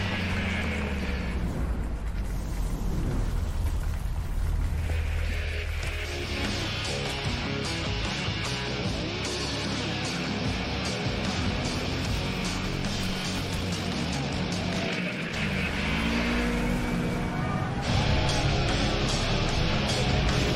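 From 4.76 to 4.90 s the audio burbles, with short blips of noise as individual frequency bands jump in level. This is DAB burbling: weak reception let a small fraction of bit errors slip past error correction into the MP2 data, corrupting samples and scale factors across what sounds like about nine frames. Between 13.39 and 15.37 s the pace suddenly doubles while the pitch stays the same, giving a rushed texture. This is likely a time-stretched section, squeezed to twice its speed by software that dropped short pieces to keep the pitch unchanged.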